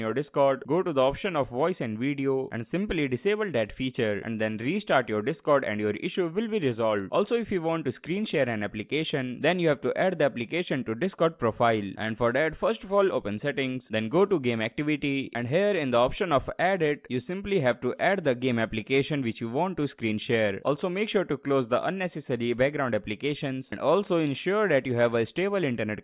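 No audible technical faults present.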